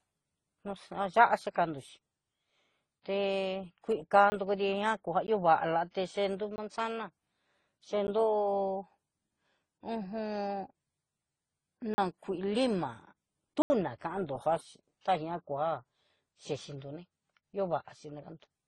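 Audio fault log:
throughout: transcoding between lossy codecs. The speech carries two overlapping sets of coding artefacts, and nothing is present above about 11.9 kHz. This fits a likely chain of low-rate AAC-LC followed by Opus, with the second encoder spending bits on the first encoder's artefacts and adding its own.
4.30–4.32, 5.27, 6.56–6.58, 8.07, 11.94–11.98, 13.62–13.70: block of digital silence. The audio drops abruptly to silence and returns without any fade. The gaps run from about 12 to 80 ms, heard as ticks at the short ones and as brief holes at 11.94 and 13.62 s.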